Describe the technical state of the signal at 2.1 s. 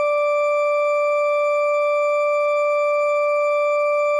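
At 2.1 s the music plays through intact, with no dropout, distortion, glitch or other fault.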